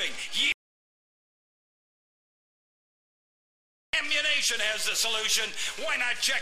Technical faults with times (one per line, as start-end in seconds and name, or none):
0.52-3.93 audio dropout to silence